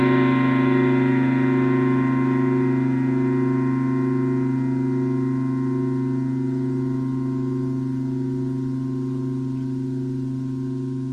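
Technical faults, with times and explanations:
6.55–10.81 s, call bitrate drop: the sound turns coarse and watery, fitting a fall from about 96 to 25 kbps; the spectrogram's upper edge drops from 16 kHz to 12 kHz.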